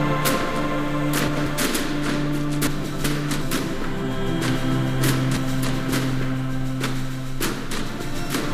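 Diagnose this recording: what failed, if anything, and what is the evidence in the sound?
Garbled flutters at 1.28–1.47, 2.67–3.42 and 5.37–5.92 s: frames out of order at the network stage, adjacent blocks of about 93, 372 and 279 ms swapped.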